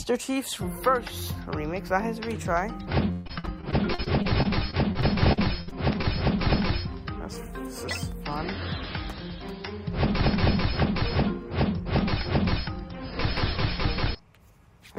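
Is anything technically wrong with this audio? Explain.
Yes. From 3.11 to 6.05 s the audio turns choppy, with pieces dropping out. This is repeated packet loss (robotic sound). Audio kept arriving late or missing, and each hole, some up to 140 ms, was patched by stretching the preceding sound, covering about 18% of that stretch.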